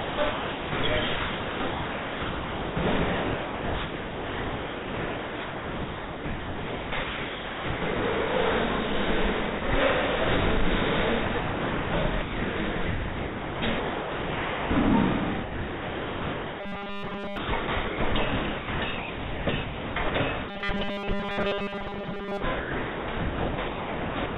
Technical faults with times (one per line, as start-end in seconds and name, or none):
0.00-8.20 sound chopped by the voice detector
9.42-9.74 sound chopped by the voice detector
11.26-14.70 sound chopped by the voice detector
15.42-24.38 sound chopped by the voice detector
16.61-17.37 robotic sound from repeated short buffers
20.49-22.42 robotic sound from repeated short buffers